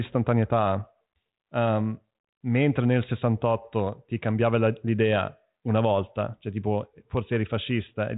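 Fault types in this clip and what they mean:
There are no fault types in this clip, so there is nothing to explain.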